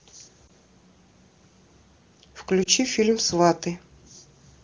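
Speech, with lost AMR speech frames twice: at 0.47 to 0.49 s and at 2.63 to 2.68 s. Each is a brief dip or warble. The length fits a single missing 20 ms frame each time. Radio errors corrupted those frames. The decoder then held the last good pitch and vocal tract settings at reduced gain to bridge the gap. The voice returns briefly weak or rough. The AMR wideband coding sounds clear, which points to a high rate.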